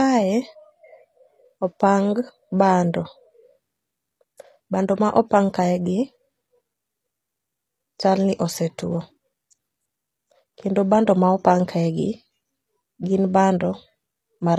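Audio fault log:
Throughout, HE-AAC compression: The treble of the speech stays bright but sounds synthetic. S sounds come out gritty and lispy with a metallic edge, and the damage is plainly audible. This is likely HE-AAC coding, which keeps only the lower spectrum and rebuilds the top by copying lower bands upward under a coarse envelope. The copied harmonics do not line up with the real ones. The heavy reconstruction fits a low bitrate around 24 kbps.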